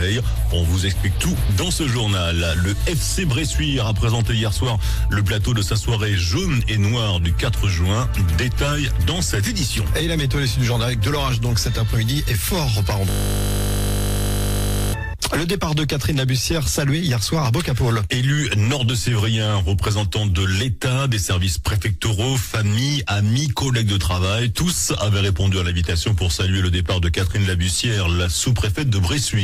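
From 13.1 s to 14.94 s the audio collapses into a steady, flat buzz pitched at 50 Hz, with no movement until normal sound resumes. This is a system hang loop. The computer or its audio driver stalled, but the sound hardware kept replaying the same 20 ms slice of its ring buffer, around ninety times in a row. That fits a 20 ms buffer. A loop that short repeats fast enough to fuse into a tone at the loop rate rather than a stutter.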